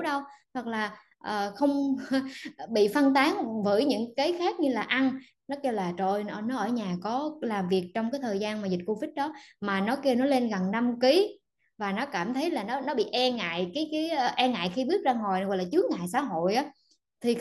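No technical faults are audible.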